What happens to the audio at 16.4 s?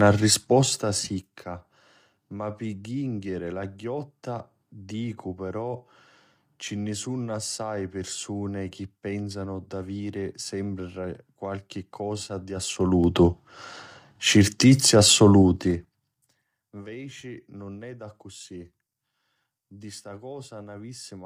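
At 16.4 s the speech is near the end of a zipper noise passage running from 15.35 to 16.51 s. The level is being pulled down about 25 dB in unsmoothed 3 dB steps, around seven per second, and each jump leaves a small click, so the fade ticks audibly instead of gliding.

Underneath, the speech carries plainly audible low-delay AAC compression damage. It sounds rough and grainy, with noise filling the gaps between harmonics and a thin, synthetic-sounding top band. The likely cause is AAC-ELD's short frames at a low bitrate, which fits roughly 32 kbps.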